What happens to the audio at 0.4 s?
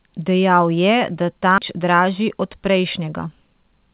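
Nothing goes wrong at 0.4 s: the speech carries on intact through that moment, band-limited to nothing above 4 kHz by the telephone-grade G.711 A-law call path it travels through.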